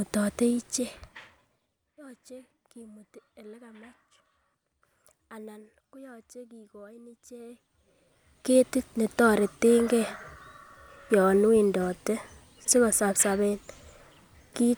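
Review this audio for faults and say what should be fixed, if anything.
The gain control moves the level in unsmoothed 2 dB jumps, around ten per second, instead of ramping it. Each jump is a small discontinuity that clicks, so the speech carries a zipper noise of fast ticking from 0.46 to 1.98 s while the level drops by roughly 25 dB, and again from 7.25 to 8.79 s as it climbs back up by about the same amount. Interpolating the gain per sample, or ramping it across each buffer, would prevent it.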